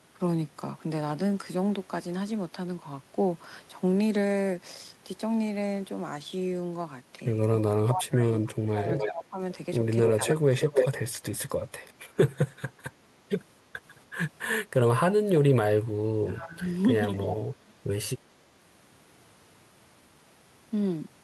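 Speech that dips in four places is most likely speech suppressed in double talk. The drops run from 7.54 to 9.39 s (deepest about 25 dB), 10.16 to 10.27 s (about 5 dB), 16.2 to 16.67 s and 17.2 to 17.76 s (about 15 dB each). Both sides spoke together, and the echo canceller turned the talker down. A delayed copy of the voice, 294 ms behind, is heard at 8.95 to 9.09 s, 10.04 to 10.89 s and 17.14 to 17.36 s. It sits about 5 dB below the speech, then about as loud, then about 10 dB below. This is echo leak. One side's loudspeaker echo likely got past its canceller and was sent back.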